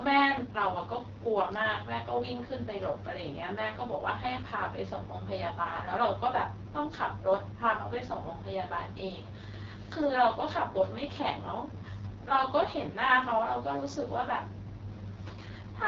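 Speech run through the AMR wideband (HD Voice) codec the whole way, and it's heavily damaged: rough and raspy, which fits the lowest 6.6 kbit/s mode. Nothing sits above 7.3 kHz, and the top band is synthetic shaped noise rather than real detail.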